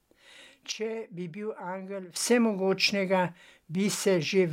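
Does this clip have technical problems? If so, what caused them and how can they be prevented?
Yes. A sudden gain jump runs from 0.72 to 2.16 s: the level drops by about 12 dB in one step and returns just as abruptly. The speech and the background noise fall and rise together, with no ramp at either edge. That sets it apart from a speaker moving off-mic or a compressor, where the noise floor would stay put or the change would be gradual. It was likely caused by a gain setting applied instantly in the digital path. Ramping every gain change over a few milliseconds prevents it.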